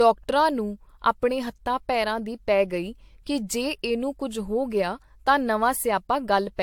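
From start to finish the speech carries generation loss: a swirly, hollow smear with blurred consonant onsets, and no content above 18.7 kHz. A single encode at a rate that fits AAC around 96 kbit/s would leave cleaner attacks. This much smearing likely comes from decoding and re-encoding roughly four times, each pass quantising on a shifted frame grid so the noise and spectral holes pile up rather than staying fixed.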